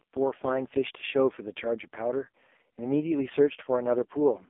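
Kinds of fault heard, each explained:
AMR narrowband mobile codec: The whole clip carries the sound of AMR narrowband mobile coding at its lowest rate, which fits a 4.75 kbps mode. Speech is rebuilt from a vocal-tract model excited by sparse pulses every few milliseconds, so the damage is heavy: voices turn buzzy and synthetic. A telephone band of roughly 250 Hz to 3.5 kHz remains. On a spectrogram everything above 3.6 kHz is empty, with a smeared, blocky harmonic structure below.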